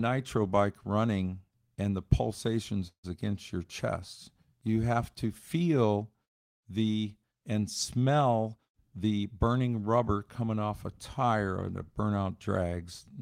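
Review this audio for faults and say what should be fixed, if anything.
Packets were likely held up on the network, and the jitter buffer ran dry from 2.87 to 3.06 s, producing a call audio freeze. The receiver stretched the last bit of speech into a fading buzz for about 160 ms, roughly 100 ms of it effectively silent. When the packets arrived, the audio resumed exactly where it had stopped. Nothing was lost, but a gap was inserted and the call's delay grew by about 160 ms. A deeper or more adaptive jitter buffer, or a steadier network path, would ride out this kind of stall.

From 8.52 to 9.68 s, a jitter buffer speed-up follows: the buffer held more audio than its target, so the receiver trimmed short pitch-period slices over and over to shed the excess, about a fifth of a second in total. Speech in that stretch runs at about 114% speed with unchanged pitch and sounds hurried, ending just before "rubber coming off a". 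Draining surplus delay more gradually, or spreading the trimming across quieter passages, would keep the pace from audibly rushing.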